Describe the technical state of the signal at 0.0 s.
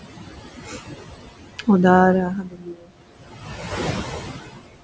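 At 0.0 s the background noise is already pumping with the speech. It dips away in the gaps and swells back underneath the speech. These are noise suppressor artifacts, present across the whole clip. The suppressor judges each frequency band frame by frame and pulls down whatever it takes for steady room noise, by about 15 dB here. That room noise sits about 12 dB below the speech, within a band that stops at 8 kHz.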